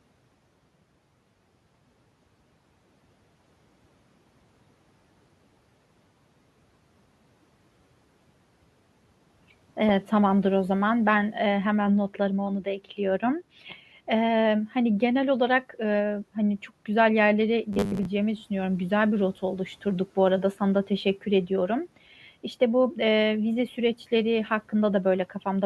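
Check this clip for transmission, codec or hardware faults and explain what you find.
Two faults are audible, with the room noise sitting about 29 dB below the speech.

From 12.59 to 13.0 s, parts of the speech sound swallowed and faint, dipping by about 11 dB over roughly 150 ms. This is speech cut by the noise suppressor, which mistook quiet speech for background noise.

From 17.73 to 18.06 s, the sound becomes a rigid, metallic 100 Hz buzz. This is robotic sound from repeated short buffers. Most of that stretch is likely filled by repeating what fits a 10 ms buffer while the real audio is skipped.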